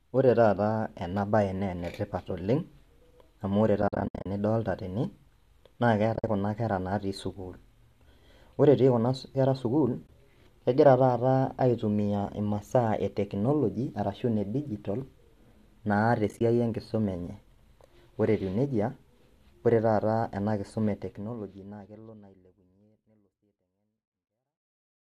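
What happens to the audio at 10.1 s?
A soft-edged gap from 10.07 to 10.09 s: AAC frame loss with muting, about 20 ms of lost frames silenced and crossfaded by overlapping windows.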